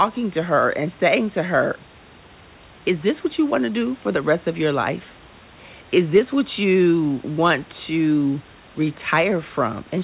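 Nothing goes wrong anywhere in this speech clip; it just has the narrowband sound of a phone-style call, with nothing above 4 kHz, which fits G.711 mu-law, and a bit of room noise sitting about 29 dB below the speech.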